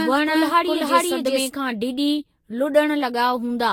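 From the very start the speech is already doubled, likely because a second, slower capture path or a misaligned edit mixes in a copy of the same audio. This doubled audio track trails the original by roughly 0.4 s at about the same level. Each syllable returns as a flat, full-range repeat with no reverberant tail or room colour, so it sounds like a second layer of speech rather than an echo. It ends abruptly at 1.48 s.

Across the whole clip the audio shows generation loss. It has likely been decoded and re-encoded about five times through a lossy codec, and the character points to Vorbis at around 60 kbit/s. Each pass quantises on a shifted frame grid, so errors accumulate. The result sounds swirly, hollow and smeared, worse than a single encode at that rate. Consonant attacks are softened, and nothing is present above 16.6 kHz.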